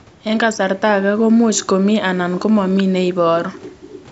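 No technical faults can be heard in this speech.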